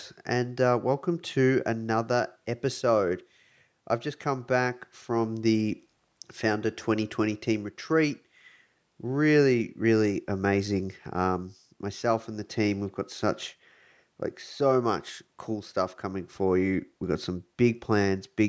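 Nothing stood out on listening to this speech recording, which has come through a call's microphone processing that trims the lowest bass and carries nothing above 8 kHz.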